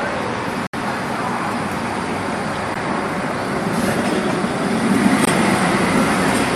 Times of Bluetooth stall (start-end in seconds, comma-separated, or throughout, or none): 0.67-0.74, 2.74, 5.25-5.27